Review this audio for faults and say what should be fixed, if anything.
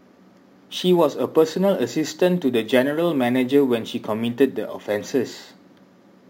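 Crude rate conversion throughout, consistent with 32 kHz audio raised to 44.1 kHz by repeating nearest samples, leaves a gritty inharmonic fizz on the speech, roughly 30 dB down. Prevent it by resampling with a proper band-limited interpolation filter.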